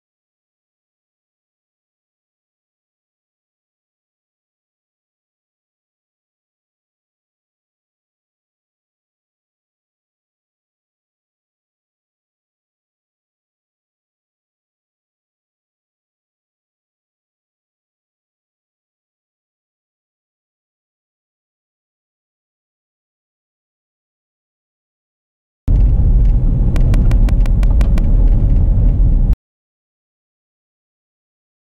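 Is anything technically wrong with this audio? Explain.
Yes, there is a train of clicks from 26.76 to 27.99 s: about seven regular ticks, 5.75 per second and roughly 5 dB above the sound, likely from interference. They appear as evenly spaced vertical lines on a spectrogram and sharp spikes on the waveform.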